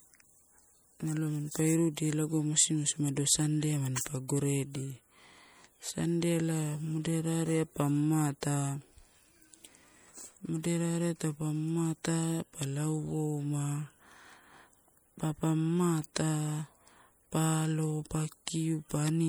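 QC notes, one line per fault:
Throughout, MP3 compression: watery, swirling s sounds and smeared consonant attacks, likely from lossy MP3 encoding, consistent with a 64 kbps bitrate.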